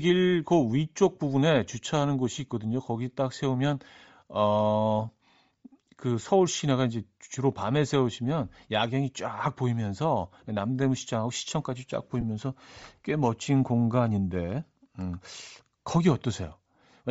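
Speech with a breathy, grainy edge to the voice and a noisy haze where the upper frequencies should be, which is plainly audible throughout and most likely Bluetooth LC3 compression at a low rate, consistent with about 32 kbps. From 12.21 to 12.23 s the sound briefly turns into a noisy smear, a short patch of lost LE Audio frames that fits two missing 7.5 ms frames concealed by the decoder.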